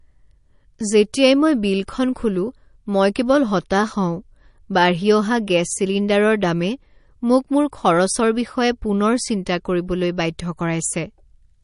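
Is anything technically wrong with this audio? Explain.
Yes. Throughout the speech there is a hard ceiling at 10.6 kHz with nothing above it, and the sound has a plainly audible watery, swirling texture. This is likely MP3 compression at a low rate, around 40 kbps judging by the damage. Short of bits, the encoder drops all treble above a fixed frequency and discards weaker frequency components, which then flicker in and out from frame to frame. That flicker produces the swirl and makes the s sounds chirpy and metallic, and the attacks are smeared.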